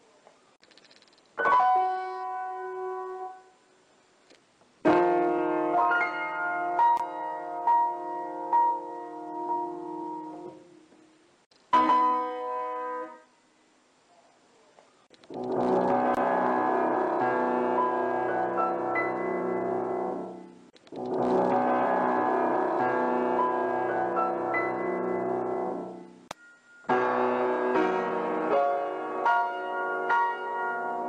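Two gaps at a join of encoded pieces, at 6.97 s and 16.15 s, each about 23 ms of silence where separately encoded segments were butted together untrimmed.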